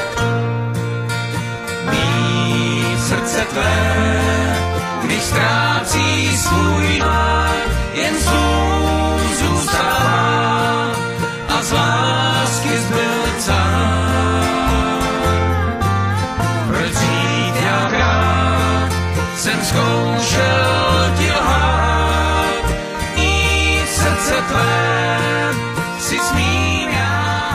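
Damaged data in a compressed stream at 6.97–7.03 s, 17.84–17.90 s and 23.13–23.18 s: corrupted frames make the decoder lose sync, giving brief glitches.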